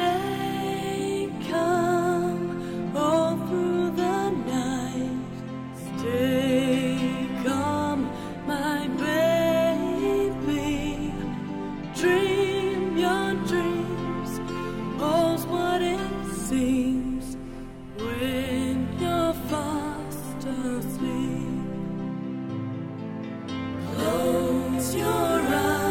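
Listening closely, nothing in the audio stood out as a technical problem.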